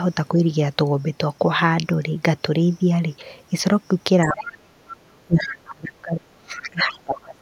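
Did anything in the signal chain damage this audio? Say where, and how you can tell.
Yes, in the call processing stage, where the echo canceller handles both directions at once. The speech is pulled down in three places, most likely speech suppressed in double talk: the canceller hears the far side playing and ducks the near talker along with it. At 0.34 to 0.4 s the dip is slight, about 5 dB. From 4.25 to 4.83 s it deepens to about 35 dB, and from 5.25 s to the end the speech sits up to about 30 dB down.

The same stage also lets short scraps of the other side's voice leak through. They turn up at 4.9 to 4.95 s, 5.37 to 5.46 s, 5.65 to 5.69 s and 5.86 to 5.91 s, mostly about 20 to 25 dB below the speech and rising to about 10 dB below at 5.37 s. They are fragments of a second talker, the residue the canceller most likely failed to subtract from the microphone.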